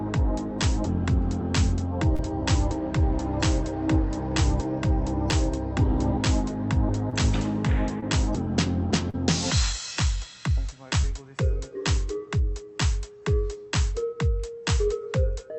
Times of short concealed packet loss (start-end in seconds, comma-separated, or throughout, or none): 2.15-2.21, 7.10-7.14, 8.00-8.04, 9.10-9.15, 11.01-11.12